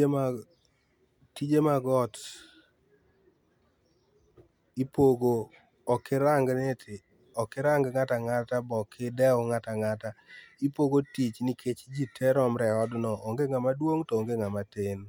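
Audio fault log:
No faults heard in this speech.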